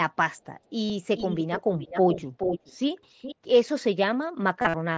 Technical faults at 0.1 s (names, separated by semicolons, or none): none